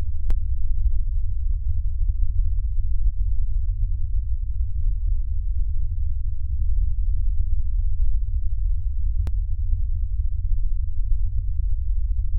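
A recording of everyday sounds with two DC steps, at 0.31 s and 9.27 s: the waveform's zero line jumps by about -20 dBFS, giving a low thump each time, then bleeds away within tens of milliseconds as a 5 Hz high-pass pulls the offset back to zero.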